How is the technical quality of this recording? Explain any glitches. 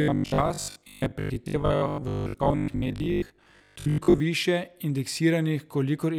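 The recording has one clear glitch: robotic sound from repeated short buffers, running from 0.02 s to 4.2 s. Through that stretch the speech turns into a rigid, metallic buzz pitched at 50 Hz that still loosely tracks the words. The likely cause is new audio arriving too slowly, so playback repeats the last chunk, which fits a 20 ms buffer, while roughly half the real audio is skipped. Unlike 50 Hz mains hum, the buzz comes from the repeats themselves rather than sitting underneath the speech, and it stops at 4.2 s.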